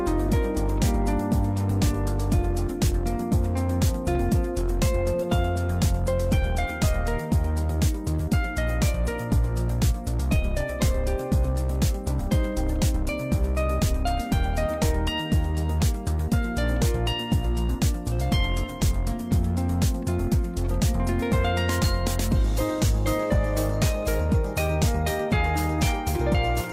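No technical faults can be heard anywhere in the recording. There is no moment where the sound breaks, jumps or changes in a way that points to a problem in the chain.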